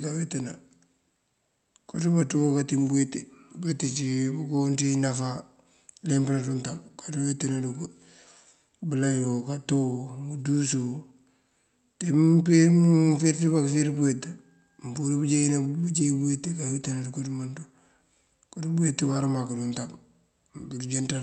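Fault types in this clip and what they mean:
No faults can be heard anywhere in the speech. The audio carries the mild coding texture of a call path, with its top end stopping at about 8 kHz, which fits an Opus call running normally.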